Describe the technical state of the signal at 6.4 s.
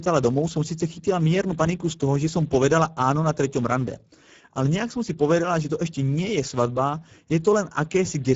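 Speex codec damage is present at 6.4 s and runs through the whole clip. The CELP coder has too few bits to model the excitation, which fits a bitrate near 10 kbps, so the speech sounds plainly noisy and hoarse, with nothing above 7.7 kHz.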